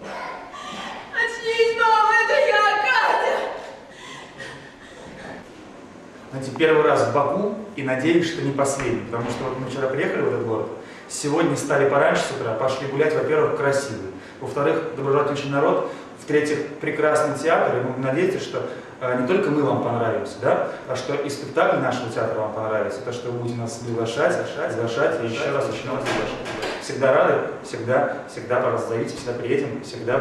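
From 23.81 s to 26.77 s a doubled audio track appears: a second full-band copy of the sound trails the original by roughly 400 ms, about 5 dB quieter, with no decay or room colour. It starts and stops abruptly, likely from a slower second capture path or an edit holding two misaligned copies.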